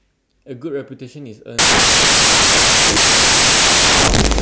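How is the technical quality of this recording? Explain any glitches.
The recording breaks down partway through. From 1.59 s to the end, the samples are built from the wrong bytes: the reader misassembles each sample's bytes, so the rapidly changing low bits dominate. The speech turns into loud, harsh broadband noise.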